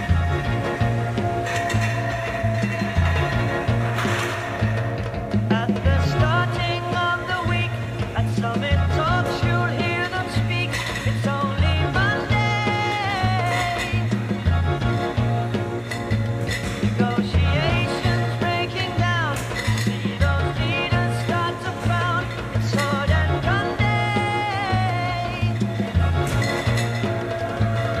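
No technical faults are audible anywhere in the recording.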